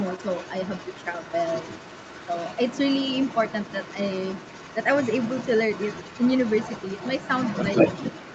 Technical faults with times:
0.00-8.35 other side's voice leaking through

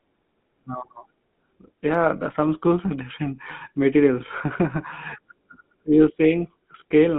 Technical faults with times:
0.00-7.18 GSM full-rate codec

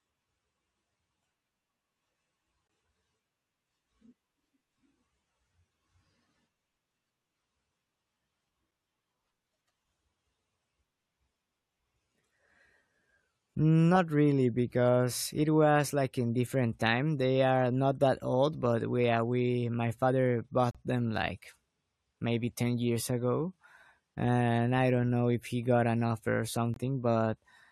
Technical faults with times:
2.67 gap between stream segments
14.71 gap between stream segments
20.71-20.75 gap between stream segments
26.74-26.76 gap between stream segments

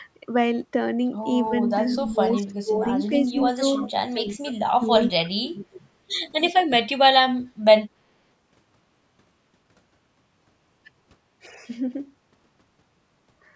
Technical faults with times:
1.49-5.83 speech suppressed in double talk
2.26-2.30 echo leak

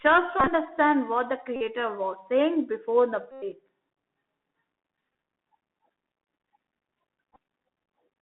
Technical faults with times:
0.00-8.22 Bluetooth CVSD headset codec
0.40-0.48 Bluetooth headset packet repeated
1.56-1.61 Bluetooth headset packet repeated
3.31-3.43 Bluetooth headset packet repeated
5.13 Bluetooth headset packet repeated
7.34-7.36 Bluetooth headset packet repeated

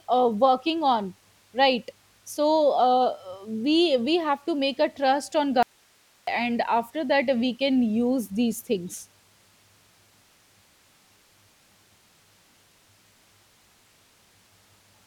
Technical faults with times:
5.63-6.27 audio dropout to a faint residue

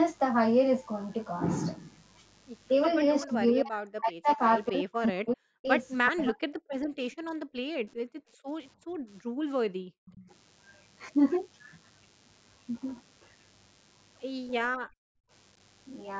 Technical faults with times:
0.00-16.20 DECT cordless phone buzz
3.21-3.33 echo leak
3.26-5.68 speech suppressed in double talk
6.10-6.64 speech suppressed in double talk
6.92-8.47 background gated by the echo canceller
7.12-7.16 echo leak
8.79-10.06 background gated by the echo canceller
10.06-10.31 echo leak
14.67-15.30 background gated by the echo canceller

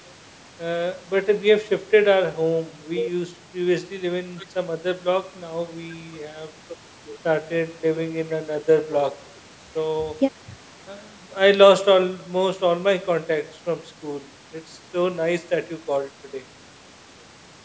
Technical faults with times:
none

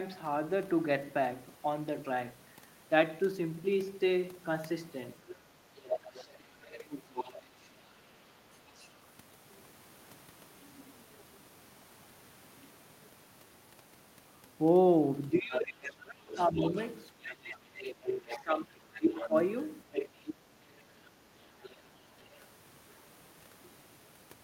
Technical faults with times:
5.29-8.99 other side's voice leaking through
15.32-19.34 speech suppressed in double talk
16.32-22.44 other side's voice leaking through
20.70-20.75 speech suppressed in double talk

